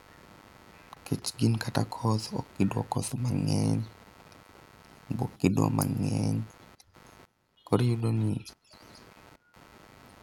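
Speech with computer activity noise running the whole way through. A buzzing pulse at roughly 100 Hz sits about 25 dB below the speech. It follows the computer's load, not the talking. Processor or graphics activity is shifting the shared ground of the audio circuit.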